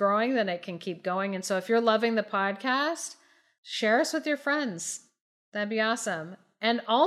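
Nothing in the speech stood out as a technical fault on listening.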